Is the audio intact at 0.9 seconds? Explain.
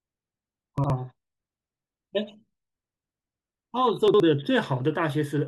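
No. At 0.9 s the speech ends a chunks-out-of-order fault running from 0.78 s: one 60 ms chunk plays a chunk late, giving jumbled hard joins, with nothing dropped or silenced.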